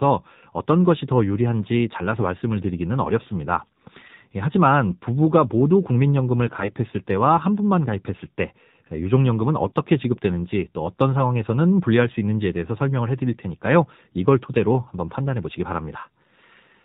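From start to finish the speech carries the sound of the AMR narrowband mobile codec. Everything above 4 kHz is gone, so a spectrogram shows a hard ceiling with empty space above it. The vocal-tract model, fed by only a few pulses per subframe, makes the voice plainly buzzy and synthetic, which fits one of AMR-NB's lower modes, around 7.4 kbps. Harmonics look smeared rather than cleanly striped.

AMR bit errors appear from 6.46 to 6.71 s and again from 9.66 to 9.74 s, the second briefer but harsher. In the affected frames, a few percent of the weakly protected bits arrived flipped while the core checksum still passed. The excitation pulses land in the wrong places and the fine pitch, gain and spectral values drift. Pitch and loudness hold roughly steady, but the voice turns hoarse, scratchy and gargly. The waveform keeps its envelope but shows jagged, irregular cycles. The spectrogram shows the harmonic stripes breaking into noisy, blotchy energy for those stretches.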